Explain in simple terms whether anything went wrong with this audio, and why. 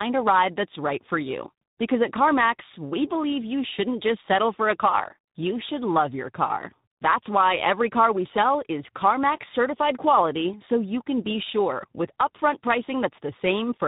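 Tandem speech coding runs through the whole clip, start to finish. The call was squeezed by one speech codec, unpacked, then squeezed again by a second, so faults stacked up. The speech sounds rough, muffled and warbly, with nothing above 3.8 kHz.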